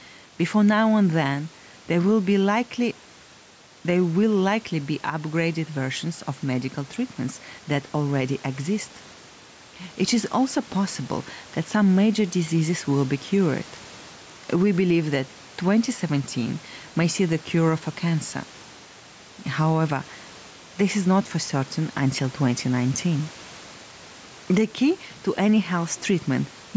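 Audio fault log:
throughout, gain pumping: gain ducks about 5 dB under loud syllables, likely a fast limiter on excessive mic gain; unlike gating, never silent.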